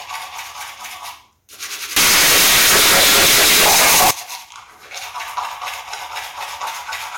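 From 1.96 to 4.11 s the sound turns into a blaring, harsh buzz, the signature of float read as integer: 32-bit float samples were likely interpreted as 32-bit integers. The waveform becomes a dense, near-square block at an almost fixed, high level, and the spectrogram fills with broadband energy.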